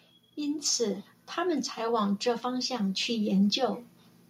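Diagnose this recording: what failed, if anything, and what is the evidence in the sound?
Automatic gain rising in call processing: from 1.77 to 3.85 s, speech and background swell together by about 4 dB, a slowly widening waveform envelope and brightening spectrogram.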